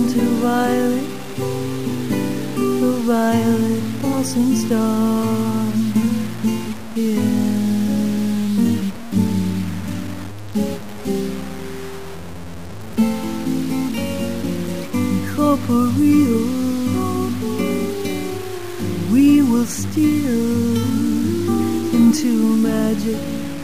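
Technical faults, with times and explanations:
Throughout, low bit depth without dither: grainy distortion tracks the sound, likely from truncation to 5 bits, leaving error about 20 dB below the signal.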